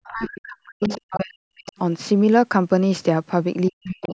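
From 0.08 to 1.78 s the talker's speech sinks and breaks up, dropping by as much as about 40 dB, so that for roughly a second and a half it comes through in faint, clipped fragments. Inside that stretch, from 0.82 to 1.18 s, a second voice can be heard underneath, about 15 dB below the talker, against the band-limited sound, which stops near 8 kHz. That is the other side's voice leaking through, most likely loudspeaker playback that the echo canceller failed to remove from the microphone. The collapse of the talker's own speech around it is speech suppressed in double talk: with both sides speaking at once, the canceller likely could not tell the near talker from the echo and pulled both down.

The same pattern returns at the end. From 3.7 to 4.15 s the talker is again cut down by up to about 40 dB for around 0.4 s, the suppression likely tied to double talk. From 3.83 s to the end, the other side's voice leaks through about 20 dB below the speech.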